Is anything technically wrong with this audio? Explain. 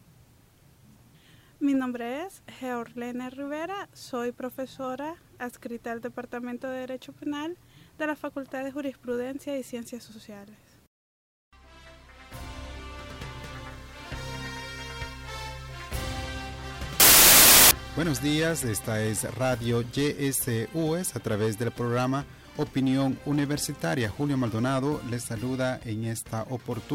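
Yes. From 17.0 to 17.71 s the sound turns into a burst of loud, harsh broadband noise. These are samples built from the wrong bytes: the reader misassembles each sample's bytes, so the rapidly changing low bits become the dominant part of every value.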